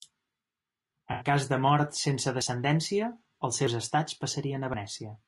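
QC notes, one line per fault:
Throughout: low-delay AAC compression. The speech is rough and grainy, with noise filling the gaps between harmonics and a thin, synthetic-sounding top band. The short low-delay frames resolve pitch poorly. This is likely AAC-ELD at around 32 kbps, where that damage is plainly audible.
0.93 s, 2.42 s, 3.67 s, 4.74 s: dropped buffer (overrun). Each is an abrupt jump forward in the sound with no gap of silence. Roughly 50 ms of audio goes missing each time, and the two sides are butted together. The likely cause is samples not being read out before the hardware overwrote them. The one at 2.42 s falls just after "cas de mort sense".
1.12–1.26 s: AAC frame loss with concealment. This is a smeared, noisy or phasey patch lasting about 80 ms, just before "cas de mort sense". The decoder has rebuilt the missing frames from the last good spectrum, so the detail is blurred rather than cut to silence.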